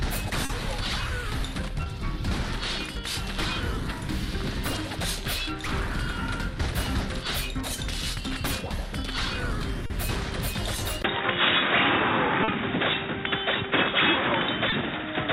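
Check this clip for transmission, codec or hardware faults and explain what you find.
Two faults are present: repeated short concealed packet loss, and a likely input switch to a poorer device.

Short concealed packet loss occurs at 0.45, 1.84, 9.86, 12.44 and 14.70 s. Gaps of 20 to 40 ms were patched by extending the preceding sound, leaving brief smears or wobbles.

At 11.02 s the sound drops out for 20 ms and then turns dull. Nothing passes above 3.8 kHz, the level shifts by roughly 5 dB, and a new noise floor appears, roughly 45 dB down. The likely cause is the input switching to a poorer device.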